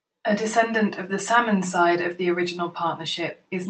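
Nothing in this speech recording stood out as a technical problem on listening.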